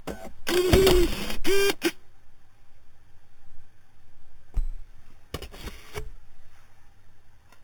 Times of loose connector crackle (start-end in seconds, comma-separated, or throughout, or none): none